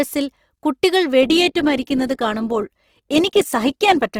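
An adaptive stream at a lower bitrate takes over at 1.22 s and runs to the end: the connection apparently slowed, so playback switched without a gap to a leaner encoding. Codec artefacts abruptly rise, which fits a drop from roughly 64 to 16 kbit/s Opus.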